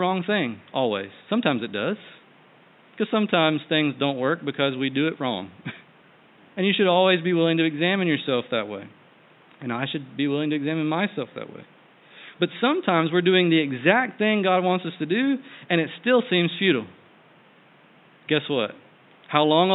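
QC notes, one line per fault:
Nothing to flag here; there's just a faint bed of room noise sitting about 32 dB under the speech.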